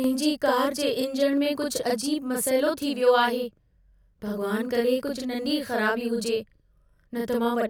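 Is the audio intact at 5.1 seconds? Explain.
No. At 5.1 s, as throughout the speech, a channel delay (doubling) is present: one channel lags by about 42.7 ms, which fits a 2048-sample buffer, and the mono sum plays a distinct, equal-level slap echo rather than the hollow comb tone of a much shorter offset.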